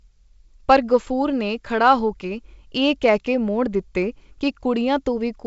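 Nothing goes wrong anywhere in this speech; it has simply come over a call link, which keeps everything below 8 kHz and adds a little of that codec's usual coding texture.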